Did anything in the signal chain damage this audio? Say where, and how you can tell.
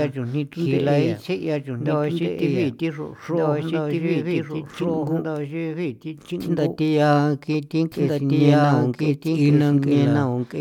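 Yes. Throughout the speech, every phrase is heard a second time about a second and a half later, at roughly the same loudness, full-band and dry, with no decay or room colour: a doubled audio track, likely from a second, slower capture path or an edit holding two offset copies.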